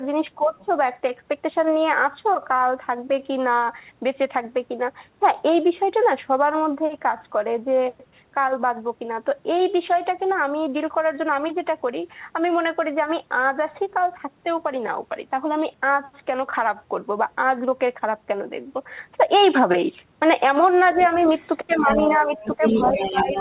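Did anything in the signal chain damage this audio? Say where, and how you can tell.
Yes. The talker's own speech sinks by about 10 dB from 0.37 to 0.67 s and again from 21.67 s to the end, while the other party is also heard. This is speech suppressed in double talk, likely from the call's echo canceller ducking everything when both ends speak.

A second voice bleeds in underneath: a faint scrap at 0.61 to 0.65 s, then about 20 dB down at 20.98 to 21.48 s, rising to only about 5 dB below at 21.64 to 22.18 s and from 22.36 s onward. This is the other side's voice leaking through, likely loudspeaker echo the canceller left behind.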